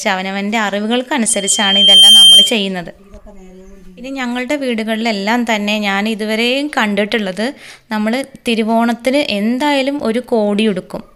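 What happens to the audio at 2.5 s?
At 2.5 s the audio is near the end of a loudspeaker feedback squeal that runs from 1.29 s to 2.61 s. A microphone was picking up the loudspeaker it fed, and at 3.2 kHz the loop gain exceeded unity, so that frequency reinforced itself on every pass. The tone swells over roughly 0.7 s into a piercing whistle about 10 dB louder than the underlying sound, then stops just after 2.6 s.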